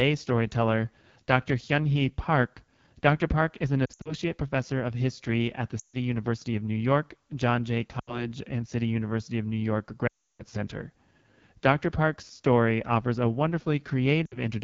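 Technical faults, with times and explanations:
Throughout: AMR wideband (HD Voice) codec. The speech sounds rough and raspy, with a grainy, buzzy edge. Bright upper sounds become a noisy hiss instead of crisp detail. The codec models speech up to 6.4 kHz with a pulse-driven vocal tract and fills the band above with shaped noise. The harshness here fits one of its lowest rates, around 8.85 kbit/s, where too few bits remain to describe the voice cleanly.
3.85 to 4.14 s, 5.79 to 5.96 s, 8.00 to 8.26 s, 10.07 to 10.44 s, 14.26 to 14.38 s: lost AMR speech frames. Each spot brings brief dips, warbles and sound that quickly fades. The voice then returns weak or rough. The first falls after "is an" and before "professor of history at", with losses scattered over about 200 ms. The second follows "of history at the". The event at 10.07 s is the longest, about 320 ms, and fades to silence. Damaged frames were discarded, and the decoder repeated its last good pitch and vocal tract settings at falling gain.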